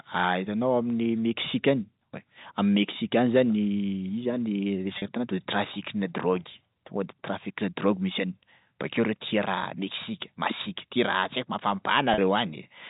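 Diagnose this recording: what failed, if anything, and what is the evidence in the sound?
Network packet loss with pitch repetition: 40 ms gaps at 4.98 s and 12.14 s, each bridged by a repeated pitch period, heard as a brief buzzy hold.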